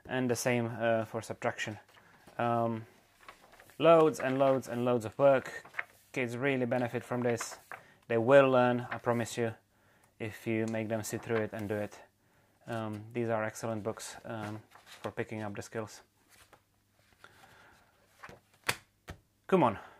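No dropouts, glitches, level jumps or other technical faults can be heard anywhere in the clip.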